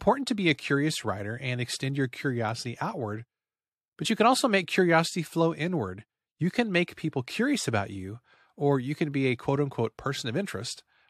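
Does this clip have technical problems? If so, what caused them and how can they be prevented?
Yes. Compressed frames skipped at 2.63 s, just after "writer and extend your", and at 4.04 s, just before "you can also make". Each time whole frames are missing or refused as damaged, so the audio jumps ahead by about 20 ms of speech. Verifying files and using error-protected transfer prevents this.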